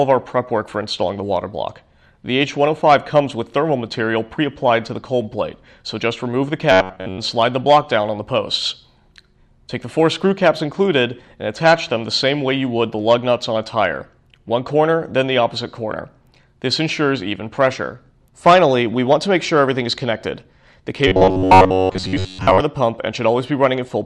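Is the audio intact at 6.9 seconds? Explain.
No. From 6.72 to 7.20 s there's robotic sound from repeated short buffers. Audio likely arrived too late, so a roughly 10.7 ms chunk kept looping over most of that stretch, stamping a rigid, metallic buzz at 93.8 Hz onto the sound.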